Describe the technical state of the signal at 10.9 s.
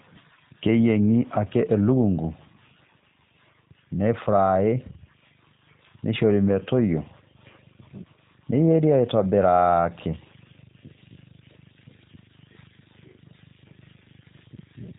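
At 10.9 s the speech carries G.729 codec damage, as it does from start to finish. The codec rebuilds each 10 ms frame from a vocal tract filter, a pitch predictor and a few fixed pulses, so nothing above 3.8 kHz survives and voicing sounds plainly rough and slightly synthetic, consistent with an 8 kbit/s stream. A simple low-pass filter would only dull the top end. Here the buzzy, reconstructed texture within the remaining band is what marks it as this codec.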